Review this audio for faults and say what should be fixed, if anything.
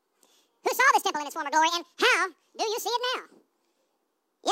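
Audio read two samples at a time (double speed), throughout: the reader treats each pair of samples as one frame, so the speech plays at twice normal speed, a full octave higher. To prevent it, make sure the reader's channel count and sample width match how the audio was actually written.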